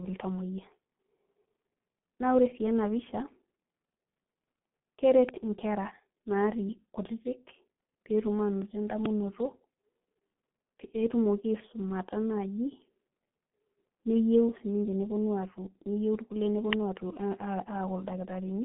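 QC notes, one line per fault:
Throughout: G.723.1 codec. The speech is confined to a telephone band of about 150 Hz to 3.5 kHz, with nothing above 3.8 kHz. It is muffled, hoarse and blurred at the consonants. The heavy damage fits a 6.3 kbit/s voice model updated only every 30 ms, unlike simple low-pass filtering, which keeps the voice clean.
5.29 s, 9.06 s, 16.73 s: uninitialised buffer. Each is a very short, loud crack where stale memory was played as samples. The first and last fit a 64-sample block and the middle one a 128-sample block. These are harsh cracks rather than silent gaps or single-sample clicks.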